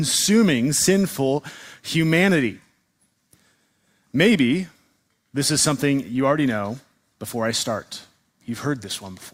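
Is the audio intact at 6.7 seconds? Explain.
Yes, at 6.7 seconds the audio is intact, with no dropout, click, distortion or other fault audible at that point.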